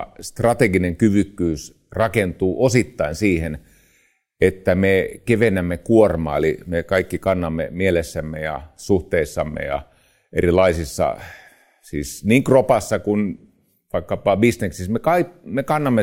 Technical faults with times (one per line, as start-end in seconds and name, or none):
none